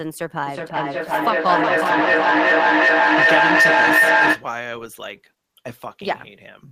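From 0.46 s to 4.52 s the speech is caught in feedback echo between two devices. A second device in the room is playing the call aloud, and its sound re-enters the first microphone, where that device's echo canceller cannot remove it. Each phrase returns at a fixed gap of roughly 0.4 s, thinner and more ringing each pass. The repeats build up to about 10 dB above the speech instead of fading. Room reverberation smears and decays and never loops like this.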